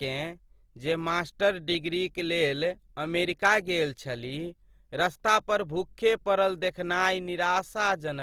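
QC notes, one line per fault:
Throughout, Opus compression: speech sounds grainy and rough, likely Opus music mode at about 24 kbps noise-filling starved bands. The spectrogram shows hazy, hole-free bands up to 20.2 kHz.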